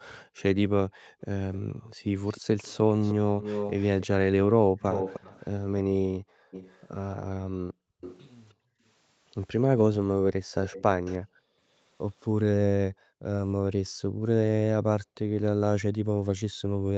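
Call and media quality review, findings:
Background gated by the echo canceller, 0.26–1.98 s, 4.66–8.83 s, 11.19–16.88 s: room tone dips about 40 dB in short bursts while far-end audio plays. Speech stays intact, so not a dropout.

Echo leak, 1.54–8.25 s (nearly speech level) and 10.64–11.18 s (well below): discrete delayed copy 309 ms behind, likely incomplete cancellation at a loudspeaker end. Fixed lag distinguishes it from reverb.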